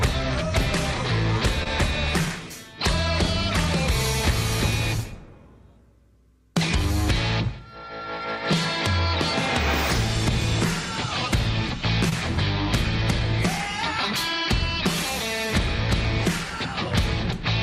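Two brief smears, each lasting a few hundredths of a second, break the audio at about 1.63 to 1.67 s and 12.09 to 12.13 s. These are short concealed packet loss: roughly 20 ms failed to arrive in time each time, and the receiver bridged the gap by extending the preceding sound before blending back.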